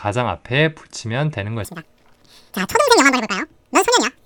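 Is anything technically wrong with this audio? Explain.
Yes. From 1.65 s to the end, the speech has a wrong sample rate. Audio captured at a rate that fits 24 kHz is played back as if it were 48 kHz, with no conversion. Everything runs twice as fast and a full octave higher. The voice sounds chipmunk-like and rushed.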